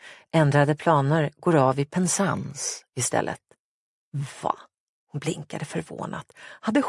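No technical faults can be heard anywhere in the audio.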